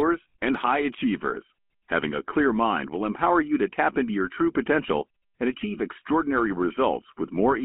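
Throughout, GSM full-rate coding rebuilds the speech from sparse pulses in a 200 Hz to 3.4 kHz band, leaving it plainly buzzy, gravelly and muffled.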